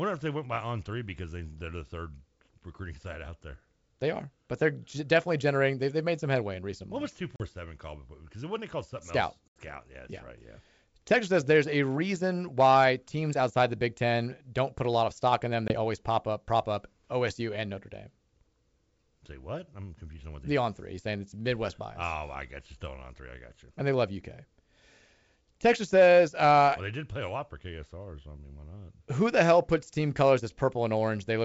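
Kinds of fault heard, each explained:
Packet loss on an ADPCM call: packets carrying the coded audio never arrived and the gaps were filled with silence, leaving the receiving decoder's adaptive predictor and step size out of step with the sender's. Each loss cuts a hard-edged hole into the speech, about 20 to 80 ms long, the longest near 9.5 s. The speech then comes back with brief, slight distortion while the decoder catches up over some tens of milliseconds.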